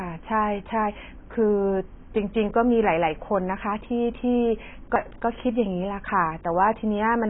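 A lossy encoder working far below its comfortable rate has most likely squeezed the whole recording through AAC compression, and the damage is heavy from start to finish. With too few bits for each frame, the encoder has discarded everything above about 3.8 kHz, which fits a very low bitrate in the region of 16 kbps. The speech sounds dull and boxed-in, its upper detail smeared, and sibilants come through as a thin, fizzy wash instead of crisp hiss.

At 4.96 s a CD skip interrupts the playback. The laser lost its track and landed on a different turn of the disc's spiral. The player muted for only a couple of milliseconds before carrying on from the new position. That brief gap is heard as a small tick, and the audio then continues from another point in the recording, so the flow of the speech breaks abruptly.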